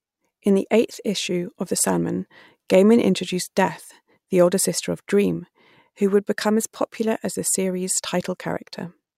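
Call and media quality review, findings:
No faults found in this speech recording. No component-level findings to raise for this call.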